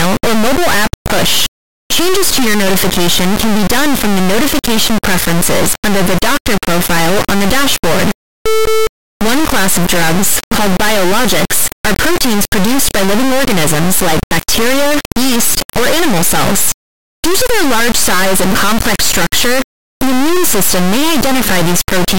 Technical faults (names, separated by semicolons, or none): integer read as float